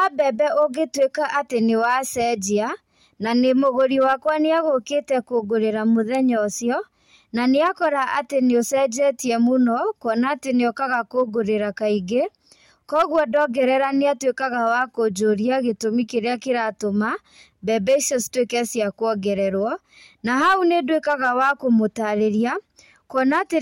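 Hard clipping runs through the whole speech clip. The signal is driven about 5 dB past what a stage could pass. Well under one percent of samples hit the limit. Those peaks are cut flat. This adds high harmonics, heard as brief crackle on the loudest sounds.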